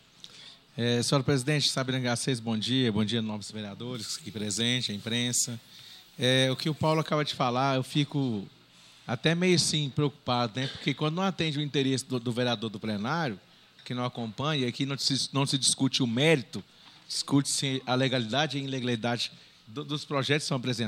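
From 3.95 to 7.06 s the audio turns thin and hissy: pre-emphasis left on, an FM 50 µs treble boost never undone, lifting 10 kHz about 10 dB.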